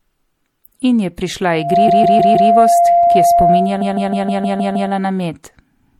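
Right through the speech there's a watery, swirly quality with smeared consonants and a dulled top end. It sounds like MP3 compression, likely at something around 64 kbps, where the encoder runs short of bits, trims the treble and lets weak detail flicker in and out.

From 1.49 s a loudspeaker feedback squeal takes over. The mic is hearing its own speaker, and the loop runs away at 690 Hz. That tone swells to full strength in about a third of a second and then sits a few decibels louder than the speech until 5.10 s.

Inside that squeal come two stretches of repeated frames, where the same 156.7 ms chunk plays over and over as a stutter. The first runs from 1.87 to 2.50 s, with four extra plays adding 627 ms. The second runs from 3.80 to 4.90 s, with seven extra plays adding 1.10 s.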